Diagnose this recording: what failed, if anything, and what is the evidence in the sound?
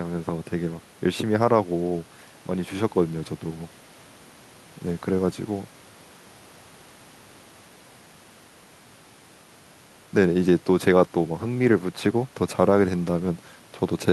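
Nothing failed: no stage in the chain, from wiring through playback, leaves an audible trace anywhere in the speech.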